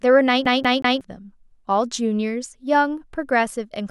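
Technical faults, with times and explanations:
0.45 to 1.01 s, CD stuck on one turn: the speech stutters in a fast, even loop, with the same 0.18 s fragment played three times and a brief mute at each jump. A scratch sends the laser back one track per disc rotation, repeating that stretch.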